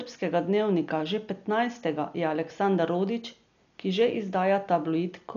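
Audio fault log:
throughout Dolby Digital compression, likely: heavily dulled speech with nothing above 7.1 kHz and fluttering noise around tones, unlike a clean low-pass, as fits roughly 48 kbps.
throughout sample clock jitter: faint roughness about 50 dB below the speech, from sub-microsecond timing errors, swelling on loud, sharp sounds and vanishing in pauses, unlike steady hiss.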